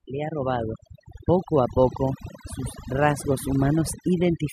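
From start to finish the background collapses into near silence with small twinkling specks. That is overdone noise removal: reduction set too hard has switched off individual frequency bands near its noise estimate, taking quiet speech detail with them.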